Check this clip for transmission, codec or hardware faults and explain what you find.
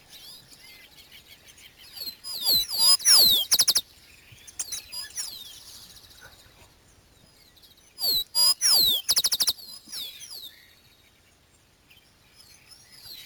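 One fault runs through the whole clip: imaging from sample-and-hold upsampling. The audio appears to have been raised from 16 kHz to 44.1 kHz by repeating samples without a smoothing filter, which mirrors the spectrum into 8 to 16 kHz at about 6 dB below the signal, adding a bright metallic fizz that tracks the sound's level.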